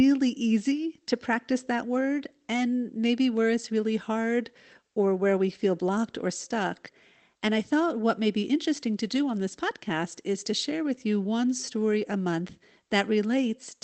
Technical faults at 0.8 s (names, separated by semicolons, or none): none